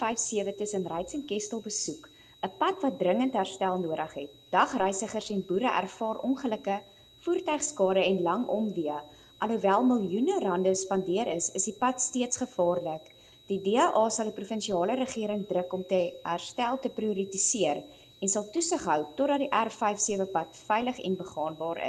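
From start to finish, a switching supply whistle sits under the sound. It is a thin high tone drifting between 3.81 and 3.88 kHz, about 30 dB below the sound. A switching power supply is running in an audible burst mode or beating with another one.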